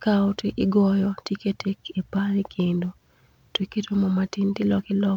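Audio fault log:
No faults heard anywhere in this speech recording.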